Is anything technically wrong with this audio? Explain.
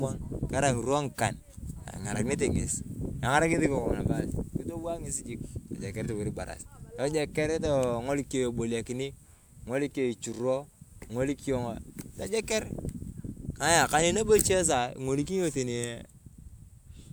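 No, nothing technically wrong can be heard here.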